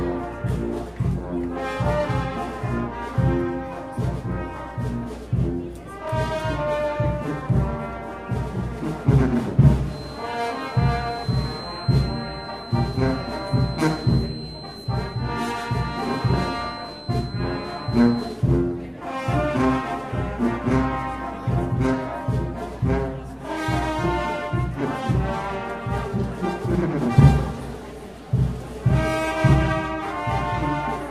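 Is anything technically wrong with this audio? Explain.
Yes. From 9.85 to 18.43 s a feedback whistle sits at 4.1 kHz, about 20 dB below the sound. A loudspeaker-to-microphone loop likely held right at its gain limit, sustaining one thin tone that swells and fades slowly in level but never builds into a runaway howl.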